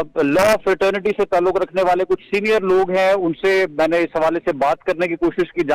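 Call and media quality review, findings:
No audible faults found on review.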